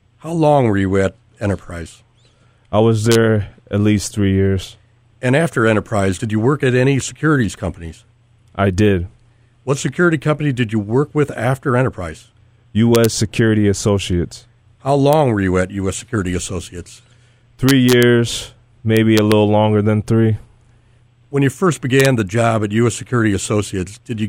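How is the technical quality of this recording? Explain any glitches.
The recording has integer overflow cracks at 3.12–3.15, 12.95–13.05, 15.13, 17.69–18.03, 18.97–19.32 and 22.00–22.06 s. Loud speech peaks wrap to the opposite sign instead of limiting, producing sharp, violent cracks harsher than clipping.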